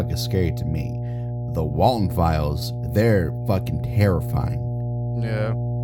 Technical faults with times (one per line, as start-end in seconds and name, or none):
0.00-5.83 mains hum